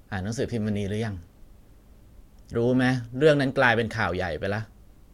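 Listening to this speech recording, nothing stood out as a technical problem.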